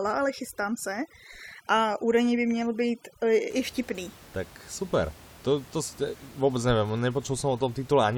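Speech clip with overdone noise removal from the start to 3.50 s. The suppressor is set too aggressively, so bands it judges close to the noise floor are pulled down or switched off. The background drops and breaks up into twinkling specks. The room noise, about 23 dB below the speech, is present where processing stops.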